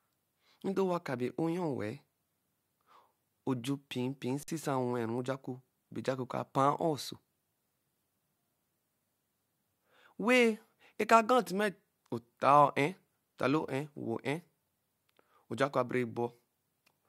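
A speech clip with one underrun with held sample, from 4.43 to 4.48 s: the output buffer ran dry and the converter just held its last value, so the waveform goes flat for 49 ms. Nothing seems lost, since playback picks up where it stopped.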